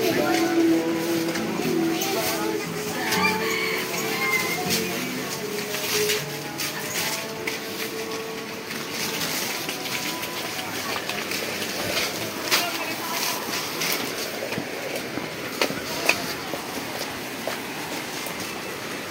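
From 16.60 s to the end at 19.10 s, the audio shows crude rate conversion. The error pattern fits a 48 kHz to 44.1 kHz change done by taking the nearest sample, with no interpolation filter, so samples are periodically skipped. That uneven spacing adds inharmonic error products roughly 20 dB below the signal, heard as a gritty fizz or buzz that tracks the louder and brighter parts of the sound.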